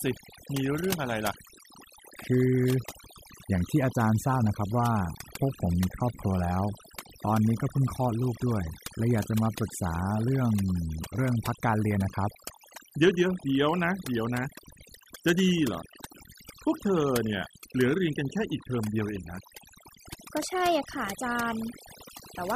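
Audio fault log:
Throughout, overdone noise removal: the denoiser's been pushed way too hard, so any frequency band sitting near its noise estimate gets clamped down or switched off. Quiet bits of the voice vanish with it, leaving a lowered background full of twinkling specks.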